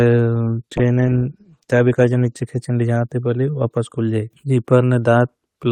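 From 0.79 s to 2.53 s the speech goes through a call bitrate drop. The call's bandwidth estimate fell and the encoder was pushed to spend far fewer bits, with the sound consistent with a fall from about 32 kbps to around 15 kbps, held at its lowest for about 1.7 s. Across that stretch Opus quantises more coarsely and trims the upper band, so the speech turns rough, muffled or watery before clarity returns.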